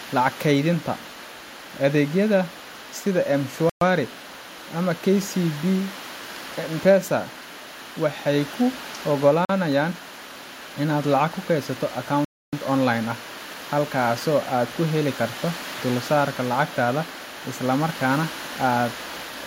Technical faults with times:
3.70-3.81 Bluetooth stall
9.45-9.49 Bluetooth stall
12.25-12.53 Bluetooth stall

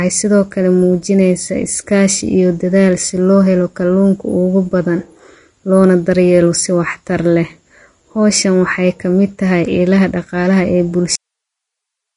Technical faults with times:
0.00-12.16 Vorbis compression

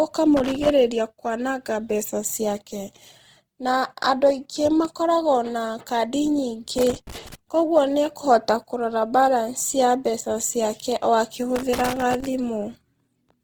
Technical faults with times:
0.00-13.44 Opus compression
0.37-0.70 loose connector crackle
6.78-7.35 loose connector crackle
11.56-12.26 loose connector crackle

